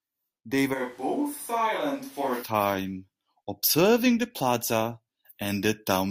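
A switch to a distant microphone runs from 0.76 to 2.41 s: the speech suddenly turns roomy and hollow, thinner in the bass and roughly 5 dB quieter, with room noise about 30 dB below it, likely because the close microphone dropped out.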